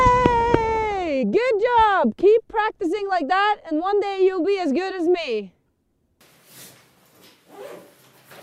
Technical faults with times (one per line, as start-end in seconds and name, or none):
none